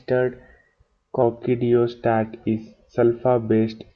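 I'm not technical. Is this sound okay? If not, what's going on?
No. Wrong sample rate from 1.22 s to the end: the speech plays back about 8% too slow, so it sounds lower and dragged out.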